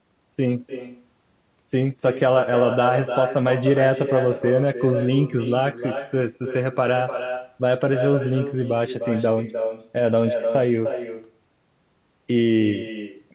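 From start to finish, every phrase is followed by a second copy. This is echo with no canceller. The far end plays the call through a loudspeaker, and its microphone picks that sound up and sends it straight back. The copy trails the original by roughly a third of a second. It sits about 7 dB below the direct speech. It sounds quieter and thinner than the original. Both copies stop at 4 kHz, which fits a narrowband telephone codec.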